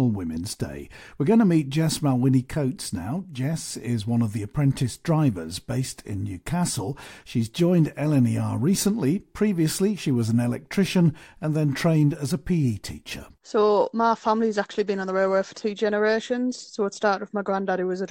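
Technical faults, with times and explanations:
The speech signal is technically sound, with nothing in the recording that points to a fault in capture, processing or transmission.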